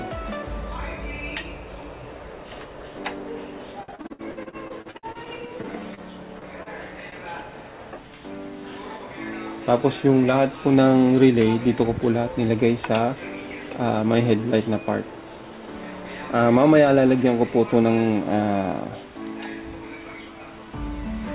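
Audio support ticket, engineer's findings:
Repeated packet loss (robotic sound), 3.83–6.00 s: choppy stretch with repeated holes, the longest 62 ms. Jitter buffer/network. Receiver keeps patching by extending the last sound, about a quarter of the span, and roughly 450 ms of real audio never arrives.

Short stall from a late packet, 6.39–6.45 s: one sound held about 27 ms too long, slight buzz or dip. Jitter buffer ran dry waiting on a late packet, stretched, then resumed where it left off. Nothing lost, just added delay.

Short concealed packet loss, 6.63–6.69 s: quick smear or wobble where about 30 ms went missing. Decoder-side concealment filled the hole by continuing the previous sound, then faded back into real audio.

Jitter buffer speed-up, 9.60–10.25 s: audio rushes at about 107% speed, pitch unchanged. Buffer had too much queued, so the receiver snipped small pitch-period chunks, around 50 ms in total, to drain the delay.

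Whole clip is band-limited at 4 kHz with typical narrowband coding noise, which fits G.711 mu-law at 64 kbps.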